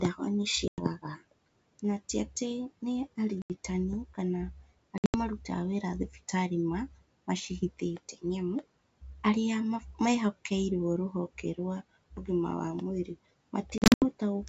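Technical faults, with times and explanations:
0.68–0.82 s, 3.42–3.52 s, 4.98–5.16 s and 13.78–14.05 s, packet loss on an ADPCM call: the speech drops into hard-edged silences of 100 ms, 80 ms, 140 ms and 180 ms. The last two are broken into several short gaps of up to 80 ms each. After each gap the speech comes back slightly distorted, and settles within some tens of milliseconds. The decoder's adaptive predictor and step size lose track of the sender's while packets are missing, and need a moment to resynchronise. The gap lengths fit a packet size of about 20 ms.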